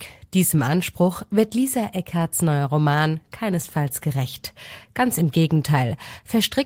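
Nothing stood out on listening to this speech recording.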